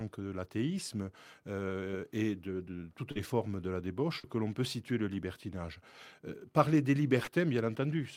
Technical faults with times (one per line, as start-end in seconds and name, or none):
3.11-3.18 short concealed packet loss
4.19-4.26 short concealed packet loss
7.23-7.30 short concealed packet loss